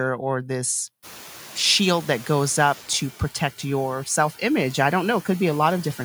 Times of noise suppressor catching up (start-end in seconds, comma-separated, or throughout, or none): 1.02-3.03